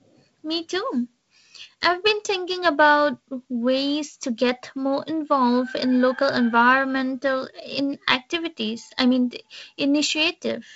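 Speech, with no technical faults to be heard.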